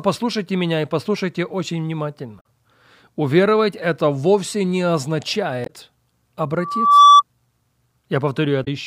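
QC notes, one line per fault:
2.37–2.45 s, 5.63–5.70 s, 8.61–8.68 s: damaged data in a compressed stream. Each event is a short glitch of about 70–85 ms, the first right after "меня и послушайте очень". Corrupted frames there make the decoder misread them, lose sync and resume at the next valid frame header.
6.59–7.22 s: loudspeaker feedback squeal. A 1.2 kHz tone swells over roughly 0.4 s to about 15 dB above the speech. A microphone-to-loudspeaker loop with gain above one at that frequency makes the tone grow on its own until the loop is broken.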